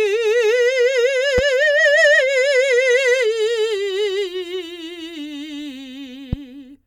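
A loud pop cuts in at 1.38 to 1.41 s and again at 6.33 to 6.35 s, each a single sharp hit around 10 dB above the music, which keeps going underneath. The likely cause is a brief voltage spike, from a connector, switch or static discharge.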